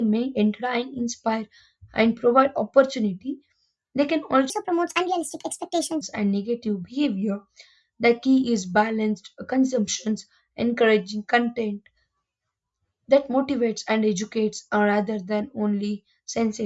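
From 4.5 to 6.0 s the speech shows a wrong sample rate fault. It runs 1.5 times too fast and sits about 7 semitones sharp, which fits 16 kHz material played at 24 kHz without conversion. The voice sounds high, thin and hurried.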